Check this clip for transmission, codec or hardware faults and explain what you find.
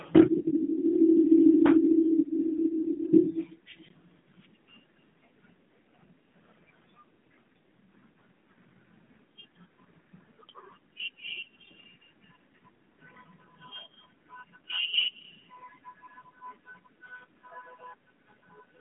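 One fault runs through the whole recording: AMR narrowband mobile codec damage, plainly audible from start to finish. The speech has been squeezed into a phone channel of roughly 150 Hz to 3.6 kHz, with nothing at all above 3.8 kHz. Its buzzy, synthetic texture comes from a low-bit vocal-tract model rebuilding each 5 ms from a handful of pulses, which fits a rate around 7.4 kbps. A spectrogram shows a hard, flat ceiling near 3.8 kHz and an empty low band below about 150 Hz.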